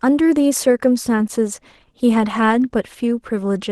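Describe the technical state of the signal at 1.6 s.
At 1.6 s the speech is intact, with no fault present beyond the ordinary coding character and band limit of the Opus call path it passed through.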